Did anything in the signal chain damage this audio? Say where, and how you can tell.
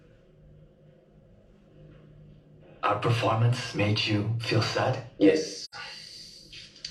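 Yes: AAC frame loss with muting at the codec stage. From 5.64 to 5.75 s the decoder zeroed the missing frames, leaving a soft, window-faded gap that fits two lost frames.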